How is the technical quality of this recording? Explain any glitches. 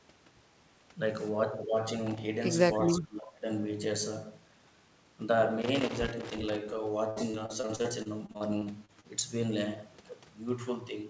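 The recording has several distinct glitches on top of a call-path sound whose band stops at 8 kHz, which fits a G.722 wideband call codec.

Loose connector crackle appears twice: briefly from 2.07 to 2.18 s, then longer from 5.62 to 6.72 s. A worn or dirty contact is making and breaking as it shifts, chopping the signal, heard as irregular scratchy crackle. On a waveform these stretches show jagged spikes and sudden dropouts. A spectrogram shows scattered vertical broadband streaks across the full band.

Between 2.78 and 3.46 s the speech sinks sharply, about 30 dB at its deepest, for roughly 0.7 s. This is speech suppressed in double talk, likely caused by an echo canceller that mistook the local talker for loudspeaker echo while both sides spoke, and attenuated everything. The waveform envelope collapses abruptly and then recovers. On a spectrogram the harmonics fade.

From 7.10 to 9.07 s there is repeated packet loss (robotic sound). 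More than a dozen short holes, the longest about 62 ms, are each patched by extending the previous sound. Concealment covers roughly a quarter of the span, so the speech turns choppy with pieces missing. A spectrogram shows smeared, frozen-looking harmonic bands interrupted by small gaps. The waveform shows repeated, self-similar cycles where the fill was stretched.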